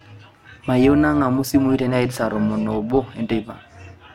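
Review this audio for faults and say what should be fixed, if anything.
Overlap-add ripple runs through the whole speech clip. The level swells and dips by about 6 dB, around 400 times a second. That gives a metallic buzz with extra tones around each note. Each dip marks one frame. The audio was windowed into frames and summed back with an overlap that does not add to a steady gain. The rate points to a hop of roughly 2.5 ms. To prevent it, choose a window and hop pair that satisfies constant overlap-add, or normalise by the summed window.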